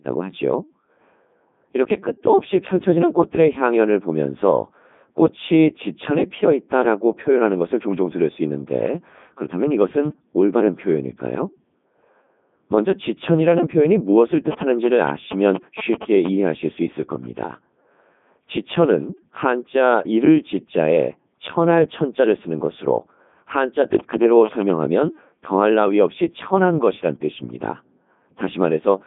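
A speech recording, carried through the Codec 2 vocoder for its full length. The voice sounds robotic and buzzy. The codec sends only pitch, voicing, energy and a coarse spectral envelope. The decoder then rebuilds the voice from sine waves, so the original waveform is lost. The damage is heavy. The density of detail fits the 3.2 kbit/s mode. The band runs from about 150 Hz to 3.6 kHz, with nothing above 3.7 kHz. From 24.0 to 24.7 s, GSM signalling bursts break in. They are a galloping dit-dit-dit of short buzzes at a 217 Hz repeat rate. A nearby 2G phone is signalling to its network, and the audio circuit rectifies the radio bursts into sound. They sit only a little below the speech level.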